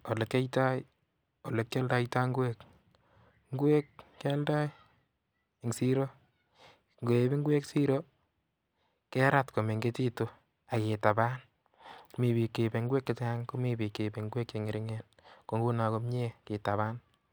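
Nothing stood out on listening to this speech recording.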